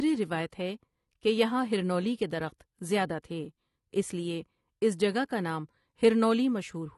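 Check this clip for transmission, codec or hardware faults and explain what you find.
One codec fault runs through the whole clip. The speech sounds dull and smeared from start to finish, with a warbling, fizzy edge on sustained sounds and sibilants, which points to AAC compression. The likely cause is AAC-LC at a low bitrate, and the degree of damage fits something around 32 kbps. At that rate the encoder lowers its high-frequency cut-off and quantises coarsely, so parts of the spectrum drop out or are filled with substitute noise, and the plainly audible artefacts follow.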